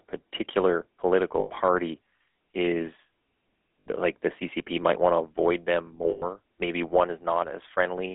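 From the start, the speech carries GSM full-rate codec damage, and it is plainly audible. The codec rebuilds the voice from a vocal-tract model driven by sparse, regular pulses, so the result sounds buzzy and gravelly. That fits a 13 kbps GSM stream. The band sits between 250 Hz and 3.5 kHz. Low warmth and high detail are both gone. The roughness runs through the whole clip.

Three bursts of lost GSM frames break in. The decoder covers each gap by repeating the last good frame, and that produces a rough, metallic ring. The first runs from 1.4 to 1.51 s, about 100 ms, which fits five lost frames. The second, from 3.8 to 3.87 s, lasts about 60 ms. The third, from 6.1 to 6.24 s, is the longest, at about 120 ms.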